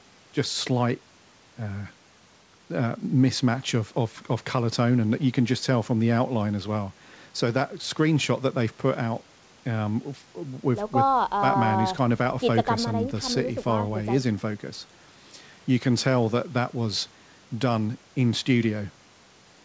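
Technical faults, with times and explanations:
Nothing in this speech clip stands out as a fault; it simply carries the usual character of a G.722 call line, with nothing above 8 kHz.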